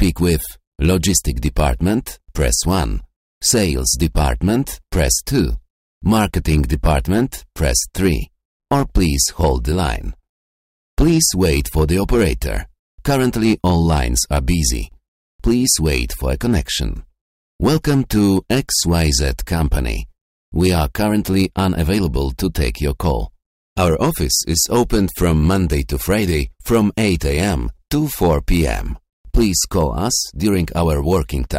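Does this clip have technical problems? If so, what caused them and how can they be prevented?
Yes: hard clipping runs throughout, heard as a gritty crackle on the loudest peaks. The signal is driven about 7 dB beyond what a stage can pass, so a small share of samples, roughly one or two percent, are cut flat, adding harsh high harmonics. Setting input gain lower, leaving headroom before conversion or any fixed-point stage, prevents it.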